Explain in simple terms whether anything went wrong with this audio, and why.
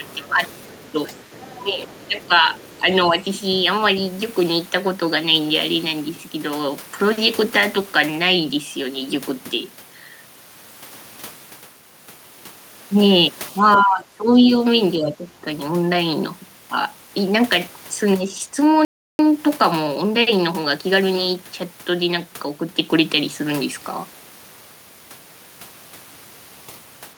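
Several things go wrong. At the very start, from 0.0 to 0.42 s, and again at 1.07 to 1.17 s, 1.6 to 3.15 s, 13.76 to 14.51 s and 14.96 to 15.46 s, the talker's voice briefly dips, most deeply around 14 s. This is speech suppressed in double talk. The likely cause is that both people spoke at once, and the system meant to cancel loudspeaker echo couldn't tell the two voices apart, so it turned everything down.

From 0.08 to 2.81 s a second, much fainter voice can be heard underneath the talker. This is the other side's voice leaking through. The talker's device plays the other person on its loudspeaker, and the microphone picks that up again. The echo canceller likely failed to remove all of it. What gets through is quiet, far below the main voice, but still audible in the background.

At 18.85 s the sound suddenly stops for about a third of a second, then carries on at 19.19 s. This is a playback stall. 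The sound halts in mid-flow rather than pausing naturally. The likely cause is that the player ran out of audio to play, or was briefly held up, and had nothing to output until fresh data arrived.

Straight after the gap, from 19.19 to 21.45 s, the speech sounds hurried, running about 1.15 times normal speed. The pitch stays the same. This is time-compressed catch-up. To make up the time lost in the stall, the player trims tiny slices out of the audio and blends the joins, so it plays faster without sounding higher.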